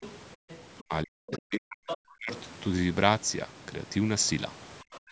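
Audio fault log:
0.01–0.14 s, 0.49–0.57 s, 0.78–0.84 s and 1.87–1.97 s, other side's voice leaking through: faint scraps of a second voice sit under the talker's speech, well below it in the first three short bursts and much closer in level, roughly 10 dB down, in the burst near 1.9 s. This is likely the far end's speech, played on the talker's loudspeaker, picked up again by the microphone and not fully removed by the echo canceller.
0.36–0.49 s, background gated by the echo canceller: the room tone drops away abruptly, by about 38 dB at its deepest, leaving a hole of around 150 ms before the ambience returns. With the loudspeaker active, the canceller clamped the microphone path hard, so the background itself was switched off along with the expected echo, then restored once the canceller released.
0.88–2.32 s and 4.83–5.11 s, speech suppressed in double talk: the talker's speech sinks and breaks up in pieces, losing as much as around 40 dB, for about a second in total over the first stretch and roughly 0.3 s at the very end of the clip. 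Both sides were likely speaking at once, and the canceller could not tell the talker from the loudspeaker echo, so it pushed everything down together.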